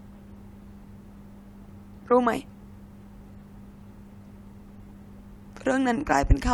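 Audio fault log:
No faults are heard in the speech. There is nothing here to log against a time.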